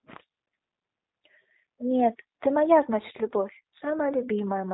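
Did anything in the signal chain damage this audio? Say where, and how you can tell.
Yes. Throughout the speech there is a rough, slightly synthetic texture and nothing above 3.9 kHz. That points to the codec stage: G.729 (the G.729A variant) rebuilds each 10 ms frame from a vocal tract filter, a pitch predictor and sparse pulses, consistent with an 8 kbit/s stream.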